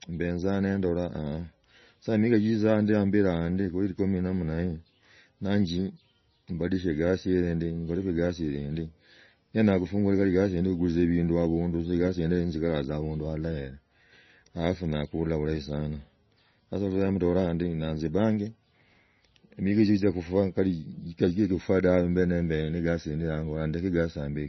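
Throughout the speech, the treble stops dead at 6 kHz and the sound turns watery and swirly, with metallic chirps on s sounds and smeared onsets. That points to heavy damage from MP3 compression, likely at a low bitrate around 24 kbps. A spectrogram shows a flat ceiling at 6 kHz and flickering gaps below it.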